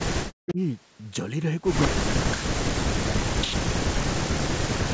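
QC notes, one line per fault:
0.00–0.59 s, 1.88–2.70 s, 3.50–3.68 s and 4.02–4.94 s, speech suppressed in double talk: the echo canceller most likely could not tell the near talker from loudspeaker echo while both sides spoke at once, so it pulled the whole signal down. The speech sinks by as much as about 40 dB in these stretches, dipping and breaking into pieces, and the longest gap runs through the final second.
1.82–1.88 s, echo leak: the far end's echo canceller likely failed to remove everything its microphone picked up from the loudspeaker, and the leftover was sent back. A brief, faint copy of the speech arrives 177 ms behind the original, about 10 dB below it. It is a short scrap rather than a sustained echo, and it ends where the suppression at 1.88 s begins.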